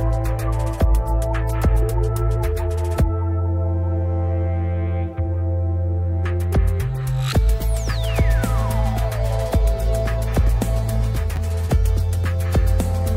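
At 11.36 to 11.38 s the audio has chunks out of order: one 10 ms chunk arrives a single chunk late and plays after its successor, leaving a brief jumbled flick across three hard joins. Unlike a dropout, nothing is missing, only swapped.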